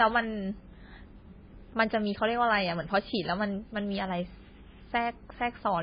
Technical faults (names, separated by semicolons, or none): MP3 compression